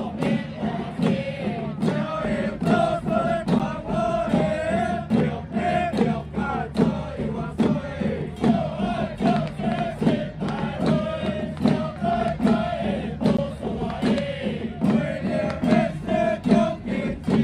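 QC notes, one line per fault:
3.59 s and 13.37 s, block of digital silence: two sharp ticks, each a hole of roughly 10 ms and 15 ms. The sound drops straight to silence and returns with no fade, which fits an output buffer not being filled in time.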